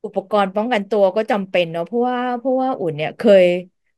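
Nothing in this bit of speech stands out as a technical fault; there's no dropout, glitch or other problem to point to anywhere along the way.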